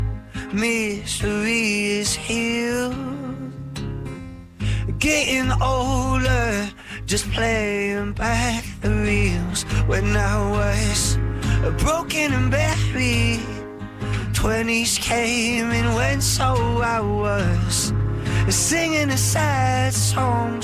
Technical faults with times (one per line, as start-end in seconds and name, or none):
none